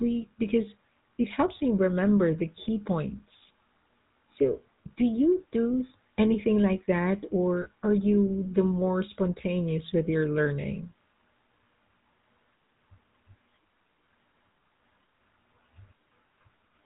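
Speech with a buzzy, gravelly roughness and nothing above 4 kHz throughout, plainly audible damage from the GSM full-rate codec, consistent with a 13 kbps stream. Its pulse-driven vocal-tract model discards fine detail. Brief rough, metallic rings occur at 7.62 to 7.68 s, between "do anything like that" and "are you the more", and at 10.44 to 10.47 s, after "more spontaneous with your". These are lost GSM frames, where the decoder repeated the last good frame's settings. The gaps fit about two frames and one frame respectively.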